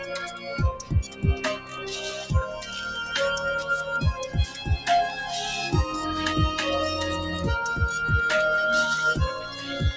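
A noise suppressor built for speech has been left on for music or sounds across the whole clip. It treats sustained parts and tails as noise and pulls them down by about 10 dB at times, so the sound pumps and thins while attacks punch through.

You can hear the suppressor cutting sound at 0.3–0.49 s, 0.73–1.91 s (deepest, about 11 dB), 2.6–2.75 s, 4.46–4.87 s and 9.41–9.7 s. Held or fading material sinks and decays get chopped short, with drops of about 5 to 9 dB in the other spots.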